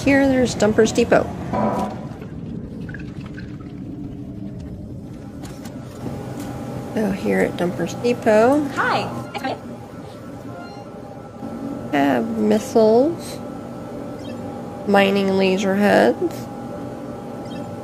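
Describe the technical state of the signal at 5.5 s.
At 5.5 s the signal is intact, with no dropout, distortion, glitch or other technical fault to be heard at that point.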